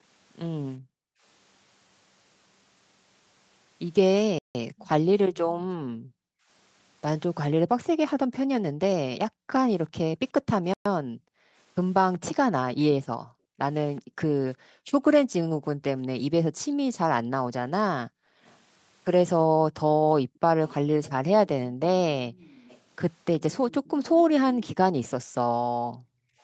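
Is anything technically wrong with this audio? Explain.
Yes, the speech has three kinds of fault.

Background gated by the echo canceller appears at 0.78 to 1.23 s, across 4.70 to 21.80 s, and at 25.69 to 26.41 s. Whenever far-end audio was playing out of the loudspeaker, the echo canceller pulled the microphone level down hard. The room tone sinks by up to about 40 dB, by about 26 dB in the final stretch, and then comes back. It totals around half a second at first, about four seconds across the long middle section, and under a second at the end.

Playback stall occurs at 4.39 to 4.55 s, lasting 163 ms, and at 10.74 to 10.86 s, lasting 120 ms. The speech cuts to silence mid-flow and then resumes. The likely cause is the player's buffer running dry or its thread being briefly blocked, so nothing was available to output until it recovered. Each gap is long enough to register as a clear hiccup rather than a click.

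Echo leak occurs at 4.84 to 5.50 s, 13.96 to 14.01 s, and 18.45 to 25.09 s. A delayed copy of the speech trails the original by 369 ms, which likely comes from a loudspeaker-side echo canceller letting part of its microphone pickup through and sending it back. The copy is faint, around 25 dB down, in the first and last stretches. In the brief middle scrap it is fainter still, as a ghostly repeat behind the main signal.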